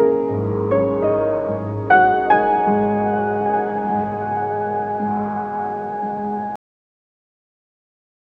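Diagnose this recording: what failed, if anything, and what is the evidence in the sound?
Cut-off end, a storage or playback buffer problem: at 6.56 s the sound stops mid-sound and drops straight to digital silence with no decay, because the final buffers never got written.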